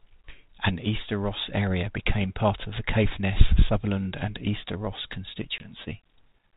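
A hard-edged gap of silence cuts into the speech at 5.58 s, and as the audio resumes it comes back slightly distorted, settling by about 5.70 s. This is packet loss on an ADPCM call. About 20 ms of audio went missing, which fits a single lost packet on this G.726 link running at 32 kbit/s, and the gap was filled with silence. Because ADPCM sends only the difference from an adaptive prediction, the receiving decoder's predictor and step size drifted out of step with the sender's during the hole. The first samples after it were therefore rebuilt from the wrong starting point, until the adaptation pulled the two sides back together over the following tens of milliseconds.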